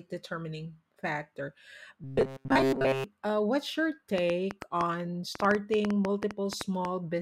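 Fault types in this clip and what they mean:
Robotic sound from repeated short buffers: From 2.04 to 3.04 s, just after "determining factor" and before "uh what's your", the speech turns into a stiff metallic buzz at 134 Hz. This is likely caused by new audio arriving too late, with the playback filling the gaps by looping a stretch of about 7.5 ms, which sets that pitch. Most of this second is repetition rather than real speech, so the words are only loosely followed.
Train of clicks: From 4.18 to 6.86 s, starting after "uh what's your", about twenty similar sharp pulses tick over the audio at an uneven pace averaging 6.75 per second. The loudest peaks stand around 15 dB above the speech. A pattern like this is likely caused by electrical interference or a faulty connection or power supply, injecting brief spikes that are audible as popping on top of the sound.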